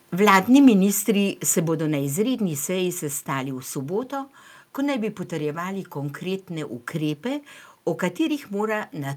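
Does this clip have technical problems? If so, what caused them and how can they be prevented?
Yes. Microphone overload at 0.28–0.38 s and 0.66–0.68 s gives harsh, crackly peaks, about 5 dB and 2 dB over full scale, likely from input gain set too high. Lower the mic gain or back off the mic.

Microphone volume stepped down at 0.68 s and 1.68 s: level suddenly drops about 2 dB, then 3 dB, as the call software likely cuts input gain. Set gain correctly beforehand so it never reacts.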